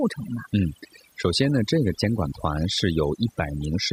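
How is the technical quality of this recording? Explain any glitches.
The recording is marred by overdone noise removal throughout. A noise reducer set too aggressively pulls individual frequency bands down whenever they resemble its noise estimate, taking soft parts of the speech along. Unlike a noise gate, the pauses fill with twinkling specks rather than clean silence.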